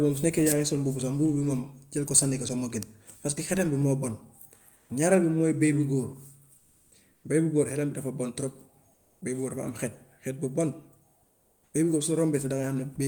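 At 4.73 to 4.89 s, about 60 ms of speech is lost and the 160 ms span is filled with flat noise. This is sound dropped by the voice detector, likely because discontinuous transmission (the behaviour fits Opus DTX) took the speech for background. On a spectrogram, the harmonic energy cuts off abruptly into an even noise band.

Comfort noise in place of the background follows at 6.57 to 6.91 s and 7.13 to 7.23 s, at 8.93 to 9.21 s (between "bi dafa bon trop" and "bëy bu góor"), and at 11.23 to 11.73 s, just before a second "bëy bu góor". In each pause, the real background, about 40 dB below the loudest speech, likely gives way to synthetic noise that is about 2 to 5 dB quieter. This shows as smooth, featureless spectrogram patches and a slight dip in the waveform's noise floor.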